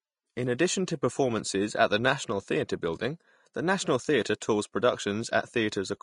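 From start to end the speech carries a hissy, grainy texture, with sibilants turned to coarse noise and consonant attacks softened; this is plainly audible damage, likely from Vorbis compression at a low setting, consistent with a bitrate near 36 kbps. The encoder's treble quantisation replaces fine detail with noise. On a spectrogram the top band stops at a lowered cut-off, and the upper harmonics beneath it break into speckled patches.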